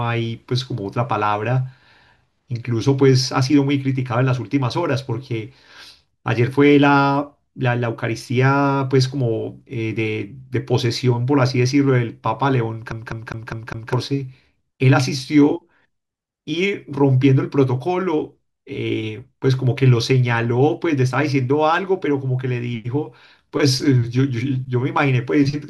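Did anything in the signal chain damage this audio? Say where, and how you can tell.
Yes, at playback: a CD stuck on one turn from 12.92 to 13.93 s. The laser jumps back every rotation, so one 0.20 s slice repeats five times, showing as identical waveform blocks separated by brief silent gaps.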